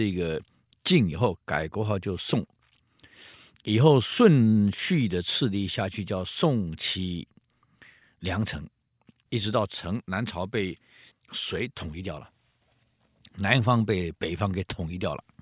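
Nothing stood out on listening to the speech here; no technical fault could be heard anywhere in it.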